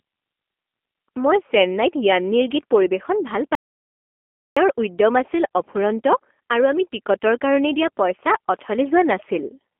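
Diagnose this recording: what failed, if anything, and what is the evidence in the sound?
The codec stage shaped the whole clip. The speech sits in a narrow telephone band, 250 Hz to 3.4 kHz, with a rough, synthetic edge throughout. That fits the G.729 codec at 8 kbit/s, which rebuilds speech from a filter, a pitch predictor and sparse pulses.

An audio dropout to silence runs from 3.55 s to 4.57 s, about 1.01 s long. The gap is total silence, with no room tone. The sound there is simply gone. The input most likely lost its signal, through a disconnected device or failed link, while recording continued.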